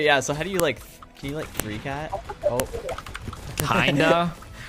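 Audio pieces joined with WAV headers left in play those header bytes as samples, giving file header played as audio: sharp snaps at 0.60, 1.60, 2.60 and 3.60 s, once per second.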